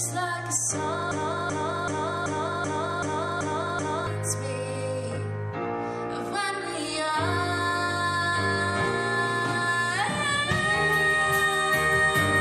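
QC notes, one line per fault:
1.11–4.07 s broken-record loop: one 0.38 s fragment repeats exactly eight times, likely a stalled stream resending its last piece, so the intended audio is lost.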